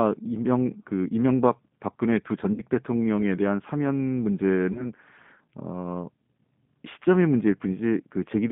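Speech, carried throughout on a G.729 codec link at 8 kbit/s. The band runs from about 150 Hz to 3.5 kHz, so the top and bottom are missing. The coding damage is plainly audible. The voice sounds rough and slightly synthetic because the decoder rebuilds it from a vocal tract filter, a pitch predictor and a few pulses per frame. The sound points to the G.729A variant.

Two stretches show VoIP packet loss concealed by the speech codec. From 2.54 to 2.64 s, about 40 ms of audio is missing, which fits two lost packets. From 4.73 to 4.91 s, about 20 ms is missing, which fits one. In each gap the decoder repeats its last pitch and filter at falling gain. This stretches the sound into a buzzy tone or a coloured noise that fades. The voice stays weak or distorted after each gap because every new frame builds on the damaged one before it.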